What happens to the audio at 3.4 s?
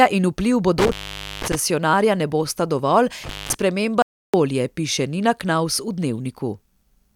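An intermittent contact, a loose cable or plug briefly losing its connection, breaks the signal path between 3.23 and 3.54 s, just after "ne bosta dovolj". The line stays open for about 210 ms, so the speech cuts out abruptly, with crackle where the contact scrapes open and again where it closes. Between those edges, only a faint hiss remains in place of the speech.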